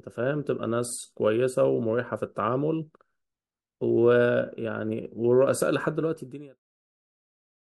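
There are no technical faults to describe in this speech, only a smooth fade out from about 6 s that ends at 6.61 s.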